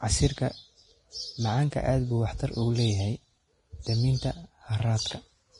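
Throughout the speech, the treble is hissy and grainy, consonants sound smeared, and voiced tones have a rough edge. The likely cause is heavy Vorbis compression at a low rate, which fits roughly 30 kbps. The encoder cuts everything above 10.6 kHz and quantises the upper band so coarsely that fine detail turns into noise of similar energy. On a spectrogram, the top edge sits flat at 10.6 kHz, with speckled, blotchy texture below it and softened onsets.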